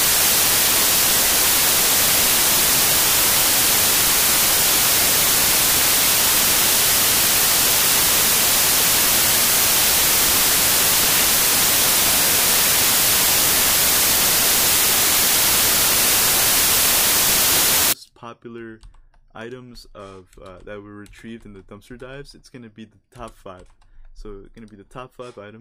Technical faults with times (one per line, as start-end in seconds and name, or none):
0.00-17.93 samples built from the wrong bytes